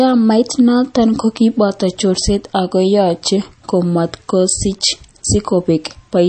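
From start to finish the speech has a watery, swirling quality, with the treble gone above about 8.4 kHz, s sounds turning metallic and chirpy, and consonant onsets smeared. This is plainly audible MP3 compression, likely at a very low bitrate, around 32 kbps by the sound of it. Short of bits, the encoder cut the top band and dropped weak frequency lines that flicker on and off between frames.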